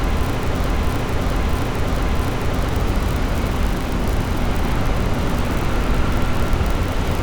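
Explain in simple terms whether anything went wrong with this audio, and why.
A broken-record loop runs from the very start of the clip to about 2.69 s. The same short piece of sound, about 0.66 seconds long, plays three times back to back, identical each time, and the loop is already going when the clip begins. The likely cause is that the player, encoder or stream stalled and kept resending the last bit it had stored. Whatever sound belonged in those first few seconds is lost.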